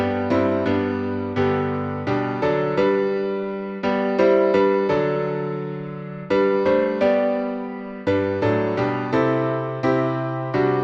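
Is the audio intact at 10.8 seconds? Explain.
Yes, the audio at 10.8 seconds is intact, with no dropout, click, distortion or other fault at that moment.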